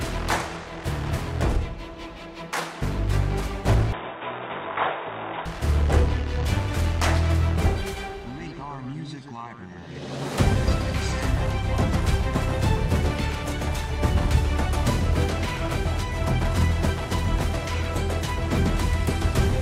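From 3.92 to 5.46 s the audio turns dull and boxy with no gap, nothing above 3.8 kHz, a few decibels quieter over faint new background noise, likely an input switched to a poorer device.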